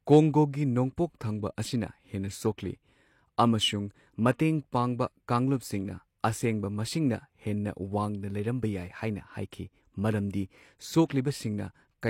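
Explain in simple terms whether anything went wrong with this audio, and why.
At about 11.05 to 11.10 seconds, a brief hiss arrives just ahead of a sharp sound in the speech, spread over roughly 44 ms. This is pre-echo: the compression treats audio in chunks, and the noise meant for the loud burst leaks into the quiet moment before it.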